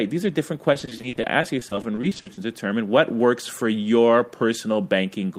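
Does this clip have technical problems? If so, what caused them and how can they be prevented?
Yes. From 0.73 s to 2.39 s, just after "are different" and up to "determine what works for", the speech suffers repeated packet loss with a robotic sound. Around twenty short dropouts, none longer than 40 ms, are each patched by extending the preceding sound, adding up to about 480 ms and nearly a third of that stretch. This produces choppy speech with fragments missing. Prevention: stabilise the network path and use a larger jitter buffer or forward error correction.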